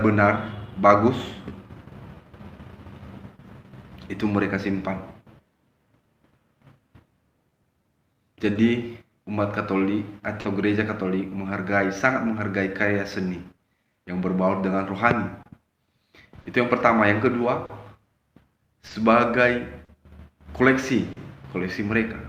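Right from the start you can hear clock drift between sender and receiver: the sender's clock is running roughly 3% slow, so the receiver's jitter buffer keeps draining and the timing never quite settles for the whole clip.

To cope, there are repeated timing corrections from 0.08 to 14.77 s. The receiver keeps repeating tiny slices to stretch the sound, playing it at about 97% speed and adding something like 0.4 s in total. The edits are unevenly spaced, so the tempo feels faintly wobbly, with the odd small hiccup.

In the middle of that there are two short stalls from a late packet, at 8.53 to 8.58 s and 10.41 to 10.47 s. Each time, the buffer ran dry and the last sound got held, 30 ms and then 40 ms, before playback picked up exactly where it left off. Nothing is lost, but you get a brief sustained buzz or dip.

From 15.43 to 21.19 s come scattered short gaps, roughly seven of them, none much longer than 40 ms. 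Each hole is patched by carrying the previous sound forward, covering about 4% of that stretch, so you hear quick ticks and little smears.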